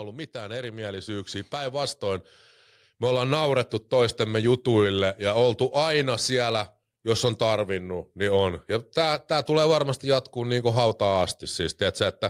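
From 0.32 to 2.33 s, then 2.99 to 4.47 s, automatic gain rising: the AGC keeps pushing up, about 9 dB then about 4 dB, so speech and background swell together.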